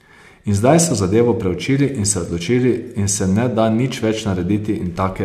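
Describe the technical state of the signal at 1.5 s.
At 1.5 s the speech signal is intact, with no dropout, clipping, distortion or other technical fault.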